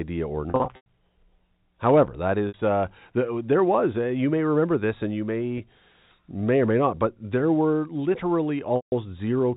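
Speech over a G.711 telephone path, with nothing above 4 kHz, shows packet loss with pitch repetition at 0.50–0.85 s (scattered gaps, longest 100 ms), 2.48–2.54 s before "uh the there was", 5.58–5.60 s after "remember this and you", and 8.76–8.92 s. The receiver loops the last pitch period, producing a brief held, buzzy tone on short gaps and fading into silence on longer ones.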